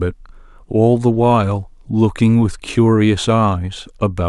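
No technical faults can be heard anywhere in this recording.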